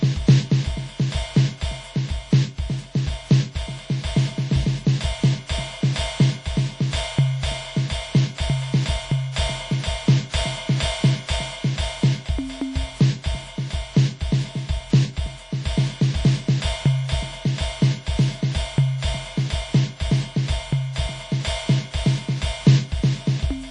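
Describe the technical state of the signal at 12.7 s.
At 12.7 s the music carries audible transform-codec damage, likely WMA compression, present across the whole clip rather than just at this moment. Quantisation noise smears over tens of milliseconds, giving a ringing, washy texture with hiss that swells and recedes with the music, and nothing remains above 10 kHz, which points to a low bitrate around 32 kbps. Unlike a plain low-pass filter, the damage also breathes and rings within the band that remains.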